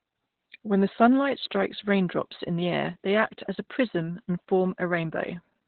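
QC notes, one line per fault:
Throughout, Opus voice compression: nothing survives above about 4.2 kHz, so the speech is narrowband and muffled, like a phone line. The band limit and the hoarse, slightly robotic texture point to the SILK linear-prediction coder running at a very low bitrate, around 8 kbps. At that rate the excitation signal is coded coarsely, so the fine detail of the voice is replaced by a rough, buzzy approximation. The damage is heavy.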